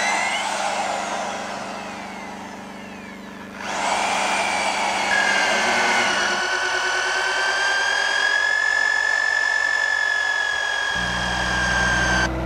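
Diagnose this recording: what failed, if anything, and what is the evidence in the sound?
A dimmer, rectifier or missing shield in the analogue wiring let mains interference into the signal path. The mains buzz runs throughout: a steady, raspy 50 Hz buzz with harmonics reaching into the kilohertz range, sitting roughly 30 dB below the wanted sound.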